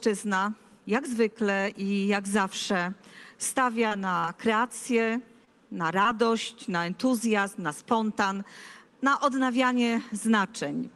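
Short concealed packet loss at 3.87–3.93, 4.19–4.25, 5.45–5.49 and 6.03–6.07 s: 20–40 ms of audio went missing, and the receiver extrapolated the preceding sound, leaving brief smears in audio that fits an Opus call path.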